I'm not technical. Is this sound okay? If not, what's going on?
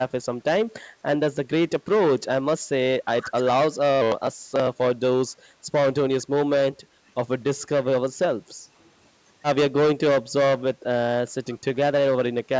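No. The speech briefly dips or thins at 0.72–1.03, 3.07–3.49, 6.03–6.22, 8.58–8.73, 10.23–10.83, 11.43–11.48 and 12.45–12.49 s. This is likely speech suppressed in double talk. Unlike network dropouts, which leave clean silent gaps, these are partial, uneven fades.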